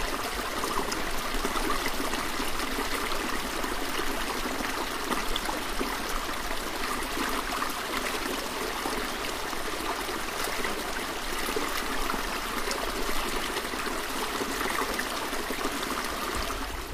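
No technical faults can be heard anywhere in this audio.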